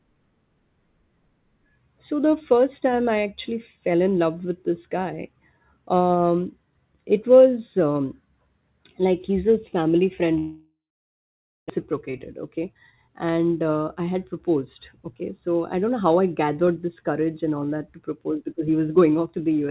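After "he's his family friend" at 10.38 s, the sound trails into a fading buzz, then about 0.9 s of silence until 11.72 s, likely a long network dropout.

From 12.58 to 15.13 s, speech runs about 11% faster at unchanged pitch, sounding hurried: a jitter buffer speed-up trimming roughly 0.3 s of pitch periods to cut delay.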